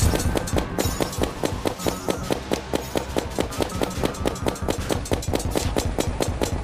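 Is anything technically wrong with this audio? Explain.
No, nothing technically wrong turns up on listening; level, timing and signal path all hold steady throughout.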